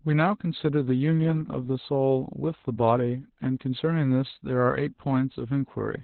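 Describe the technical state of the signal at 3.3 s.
At 3.3 s the speech sounds muffled, hoarse and faintly robotic, with nothing above 4.2 kHz. This is Opus voice compression throughout the clip: the SILK coder works in narrowband and codes the excitation coarsely, which fits a bitrate around 8 kbps.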